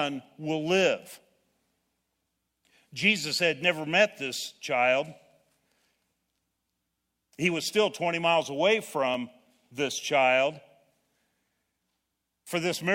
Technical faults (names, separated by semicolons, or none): overlap between stream segments